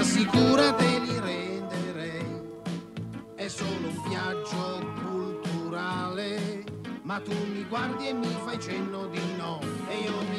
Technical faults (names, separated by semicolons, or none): zipper noise